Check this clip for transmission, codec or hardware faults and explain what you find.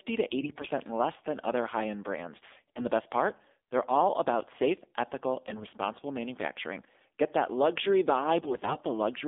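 Two faults stand out: mobile codec coloring across the whole clip, and four bursts of corrupted frames.

Throughout, the speech sounds thin, buzzy and synthetic, confined to about 250 Hz to 3.6 kHz. This is the AMR narrowband mobile codec at a low mode, around 7.4 kbps.

At 0.42 to 0.70 s, 2.48 to 2.86 s, 5.48 to 5.78 s and 8.38 to 8.77 s, the voice keeps its pitch and level but turns hoarse, scratchy and gargly, worst in the last burst. These are AMR bit errors. Flipped low-priority bits misplace the excitation pulses and skew the fine gain and spectrum values.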